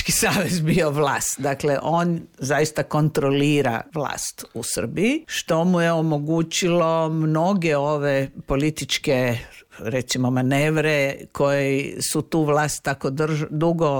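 No technical faults can be heard.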